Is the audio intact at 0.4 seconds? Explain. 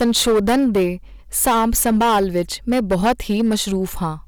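No, hard clipping runs through the whole clip, 0.4 s included: the speech is driven about 12 dB too hot, so around a tenth of samples get flattened into harsh fuzz.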